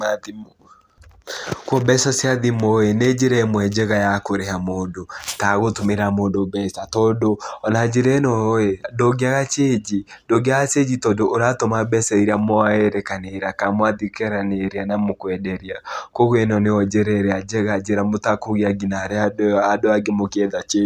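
A speech recording with nothing technically wrong with it.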